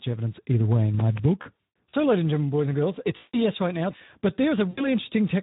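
Throughout the speech, the Speex codec is working at a low setting, which fits a bitrate around 11 kbps. With so few bits for the excitation, voiced sounds come out hoarse and grainy. A spectrogram shows smeared, noisy harmonics rather than clean stripes, and any energy above 4 kHz looks like a shaped noise wash instead of detailed consonant structure.

From 1.41 to 1.95 s, VoIP packet loss concealed by the speech codec produces about 300 ms of missing audio, spread over roughly half a second, with the longest gap lasting 140 ms. The decoder keeps repeating its last pitch and filter at decreasing gain, so the sound stretches into a buzzy tone or coloured noise that fades away. The recovery is weak and distorted, because each new frame is built on the damaged one before it.

At 3.17 to 3.40 s, a 160 ms loss causes the same frozen, decaying concealment. At 4.69 to 4.87 s, an 80 ms loss is briefer. 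On a spectrogram, each of these events appears as flat, horizontally smeared energy that dims toward silence. On a waveform, each shows a repetitive, steadily shrinking envelope where natural speech movement has stopped.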